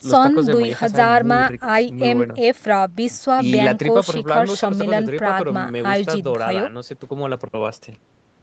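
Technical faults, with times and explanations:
No technical faults in this speech; the call microphone processing trims the lowest bass and leaves nothing above 8 kHz, both normal for that path.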